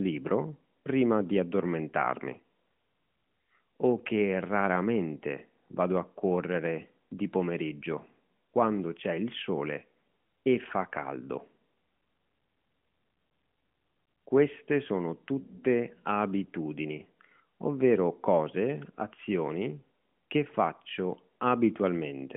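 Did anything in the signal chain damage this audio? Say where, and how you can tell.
No, the speech carries only the narrowband telephone coding expected of an AMR narrowband mobile codec link, with the band held to roughly 150 Hz to 3.4 kHz and the light coding texture that fits its highest 12.2 kbps mode, and no stage in the chain adds damage beyond that.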